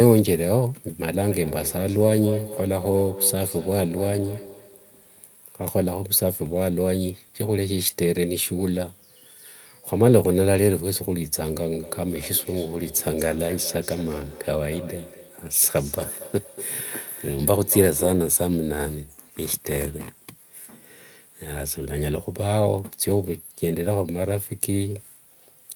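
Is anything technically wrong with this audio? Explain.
Yes, there's feedback echo between two devices, from 1.3 to 5.44 s and again from 11.74 to 18.42 s. Two devices on the same call are sharing a room, so one replays the other's microphone feed and that microphone picks it back up. Each echo canceller only removes its own device's output, so the speech returns roughly every fifth of a second, thinner and more ringing, peaking at about 13 dB below the speech the first time and about 15 dB below the second.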